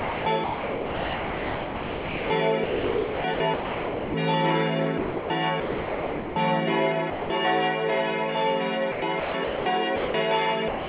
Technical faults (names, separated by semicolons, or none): sound chopped by the voice detector; sound dropped by the voice detector